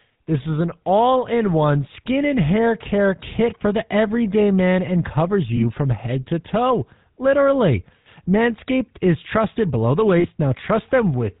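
Across the whole clip the speech has a plainly audible buzzy, gravelly roughness, and nothing comes through above 4 kHz, which fits the GSM full-rate codec at 13 kbps. This early mobile-phone coder sends a model of the vocal tract and excites it with regularly spaced pulses, keeping only a thinned-out version of the excitation signal. That coarse pulse train is what gives the speech its grainy, rasping texture.

At 5.56 to 5.59 s, between "everyday man and covers" and "from head to toe", the sound briefly freezes into a short metallic ring. These are lost GSM frames, here about 20 ms of audio, which points to a single dropped frame. At 10.2 to 10.26 s, just after "is trusted below the", a longer ring of about 40 ms follows, consistent with two lost frames. In both places the decoder filled the gap by repeating the last good frame's settings.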